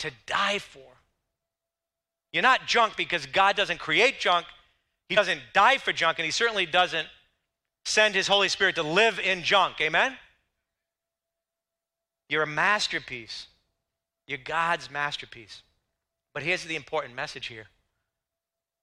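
A speech recording with two instances of compressed frames skipped. At 5.16 s, just before "die for junk and", the audio jumps ahead by roughly 40 ms, which fits two missing frames of 21.3 ms each. At 8.60 s, before "to live in junk", it jumps by about 20 ms, consistent with a single dropped frame.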